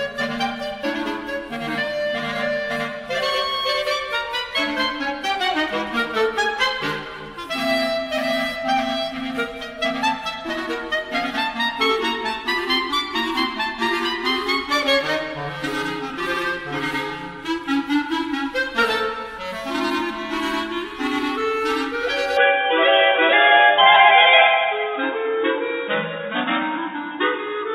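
From 22.37 s to the end, the sound turns dull, with nothing above 3.8 kHz. There is no gap. The input likely switched to a poorer device.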